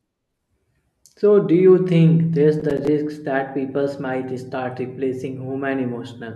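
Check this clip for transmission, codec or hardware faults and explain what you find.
One fault: processor overload crackle from 2.60 to 2.88 s, between "do you think there's" and "that people might start". About ten short buffers of around 5 ms miss their deadlines, each dropping to silence with hard edges. Unlike a single network dropout, this clustered run sounds like gritty crackle.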